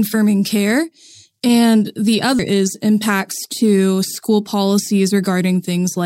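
A CD skip at 2.39 s interrupts this speech clip, falling between "care and the" and "is impacts to school". It is heard as a tiny tick, a near-instant mute of only a couple of milliseconds, after which the audio resumes from a different point. The laser has been knocked, or thrown by a flaw in the disc, onto another turn of the spiral track, so playback picks up out of sequence.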